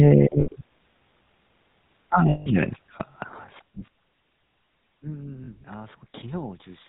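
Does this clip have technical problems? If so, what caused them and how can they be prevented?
Yes. The GSM full-rate codec gives the speech a buzzy, gravelly roughness, consistent with a 13 kbps full-rate stream; a spectrogram shows nothing above 4 kHz and coarse, smeared harmonics. Using a wideband or modern codec such as AMR-WB or Opus avoids this.

Lost GSM frames at 0.40–0.48, 2.30–2.49, 3.86–3.88 and 5.44–5.49 s are concealed by repeating the last good frame. They sound like a brief metallic ring, and on a spectrogram they appear as frozen, repeated spectral bands. The longest gap, about 160 ms, fits eight lost 20 ms frames. A cleaner radio link or stronger channel error protection would prevent these dropouts.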